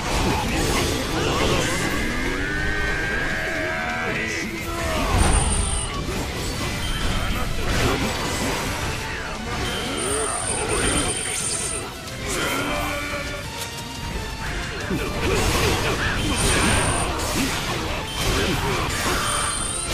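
No technical faults can be heard in this audio.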